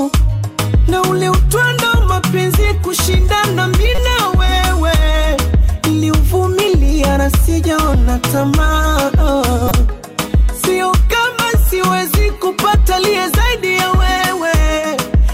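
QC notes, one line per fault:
3.95–3.99 s and 9.67–9.72 s, corrupt frame decoded: damaged compressed frames, roughly three then two, were played as-is, throwing misread energy to wrong frequencies. The result is a chirp, squeak, blip or burst of noise lasting a few frames, unlike a dropout's silence or a click's single spike.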